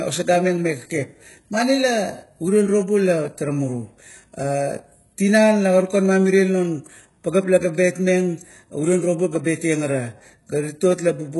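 Speech whose sibilants sound gritty and metallic throughout, with heavy codec damage and nothing above 11.4 kHz, likely HE-AAC compression at a very low bitrate, around 12 kbps.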